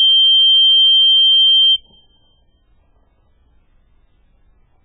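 From start to end, the music carries heavy damage that sounds watery and swirling, with smeared attacks and nothing above 3.9 kHz, likely from MP3 compression at a very low bitrate, around 8 kbps. A spectrogram shows a flat ceiling at 3.9 kHz and patchy, flickering gaps below it.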